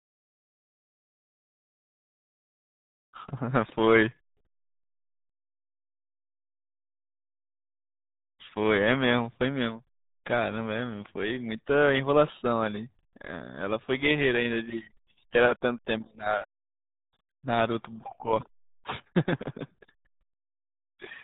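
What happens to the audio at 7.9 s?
At 7.9 s the speech is carrying the RealAudio 14.4 codec damage that runs through the whole clip. Nothing above about 3.8 kHz survives, so sibilants and consonant edges are gone. The codec squeezes speech into a very small bit budget, which fits an 8 kbit/s dial-up stream. It rebuilds the signal from coarse parameters. The damage is heavy. The result is muffled, gargly speech with a watery, smeared texture.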